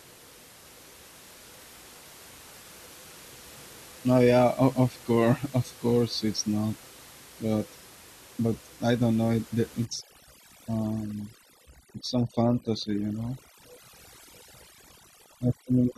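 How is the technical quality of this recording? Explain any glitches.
The recording has a clear fault from 9.85 s to the end: overdone noise removal. The steady room noise, sitting about 23 dB below the speech beforehand, gives way to it. A noise reducer pushed too hard cuts every frequency band resembling its noise estimate, taking quiet speech detail along. The background drops and breaks up into twinkling specks. A spectrogram shows scattered isolated dots and patchy, hollowed harmonics where the even noise floor was.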